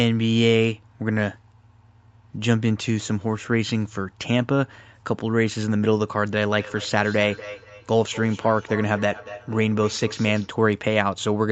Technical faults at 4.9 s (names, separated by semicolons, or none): none